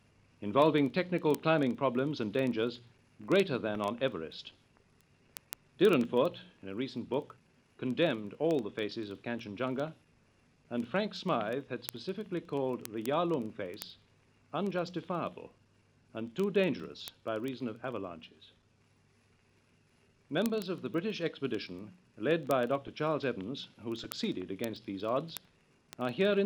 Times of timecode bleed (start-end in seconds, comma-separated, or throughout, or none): none